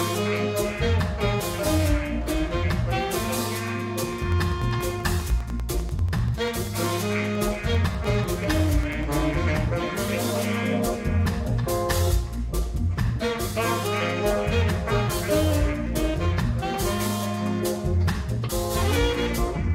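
From 4.03 to 9.04 s a train of clicks ticks steadily at about 10.2 per second, roughly fifty pulses poking about 5 dB above the sound, likely external interference.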